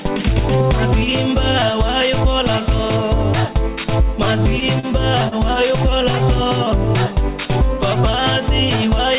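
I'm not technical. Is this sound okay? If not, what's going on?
No. From 4.19 to 4.86 s there are repeated stalls (stutter): four brief hiccups, the longest about 38 ms, where late data left the player briefly holding the last sound. From 5.28 to 5.35 s, a short stall from a late packet stretches one sound by 36 ms before playback resumes. Nothing is lost in either spot. The narrow, phone-like tone, with nothing above 4 kHz, comes from the call connection itself.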